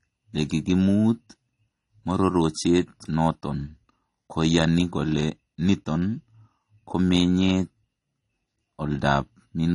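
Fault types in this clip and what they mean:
Transcoding between lossy codecs: The speech was likely encoded twice in a row, first as MP3 and then as AAC-LC, at low bitrates that point to about 40 and then 32 kbit/s. The second encoder spent its bits re-encoding the first one's damage and then added its own, so the two codecs' artefacts are heard together alongside a hard ceiling. Nothing is heard above 11.2 kHz.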